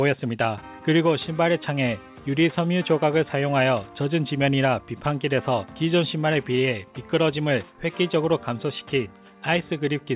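There are no technical faults to describe at any point, with the audio carried over a narrowband G.711 mu-law call path that leaves nothing above 4 kHz.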